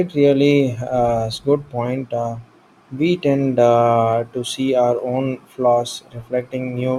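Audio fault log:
Throughout: block size mismatch (truncated). A steady buzz at about 43.1 Hz sits under the speech, which plays at its normal speed and pitch. The buzz rate fits 1024-sample blocks: at each block boundary the tail of the block is discarded, and the resulting jump repeats once per block.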